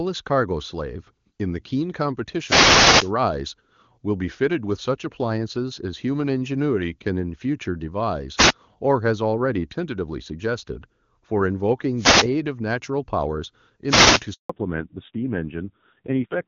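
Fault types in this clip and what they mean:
Wireless microphone noise hit: The analogue FM radio link fades as reflected signals cancel, so receiver noise swells up as a swish of static. It happens four times, at 2.41 to 3.12 s, 8.36 to 8.53 s, 11.96 to 12.30 s and 13.87 to 14.22 s. Unlike a dropout, the sound is not silenced. Hiss is laid over it, and it lasts from under a fifth of a second to about 0.7 s.
Handover gap: The call is passed from one network to another, and no speech frames arrive during the switch. The sound falls away quickly and stays silent for 160 ms, from 14.34 to 14.50 s, just after the last noise hit. Whatever was said in that moment is lost. This is true silence, not static, which sets it apart from the radio-microphone hits. The sound quality changes right after the gap.
Fallback to narrowband: From 14.50 s to the end, the HD Voice wideband link, which is clear and nearly free of coding damage before this point, gives way to an older narrowband codec. 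Nothing above 4 kHz survives, so the speech turns dull and muffled, and it also sounds rough and grainy. That roughness points to a low rate near 5.9 kbit/s. A plain low-pass filter would dull the sound without adding this coarse texture.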